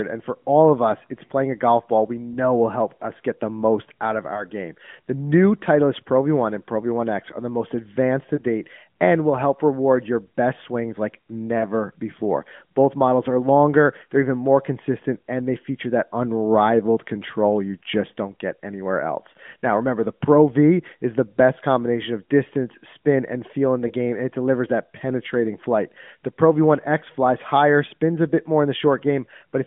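A speech recording carried over an AMR narrowband mobile link (passband roughly 150 Hz to 3.5 kHz, light codec coloration fitting the 12.2 kbps mode) shows four lost AMR speech frames, each a single dropped 20 ms frame. They fall at 4.34 to 4.43 s after "the most out of", 8.36 to 8.43 s between "the most advanced to" and "and will help reward", 11.58 to 11.66 s after "your best swings like", and 23.88 to 23.92 s. At each point the decoder fills the gap by repeating the previous frame's pitch and spectral shape at reduced gain, heard as a short dip or warble before the speech recovers.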